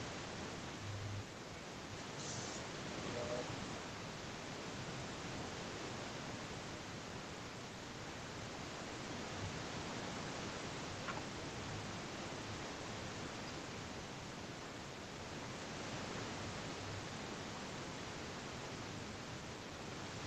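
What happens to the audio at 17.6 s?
Nothing goes wrong at 17.6 s; the speech carries on intact through that moment, with the call path's limited bandwidth, nothing above 8 kHz.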